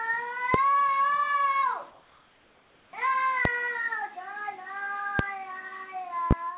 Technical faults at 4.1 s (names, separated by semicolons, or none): none